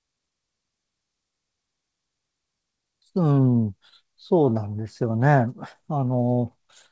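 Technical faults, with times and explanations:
No technical faults detected.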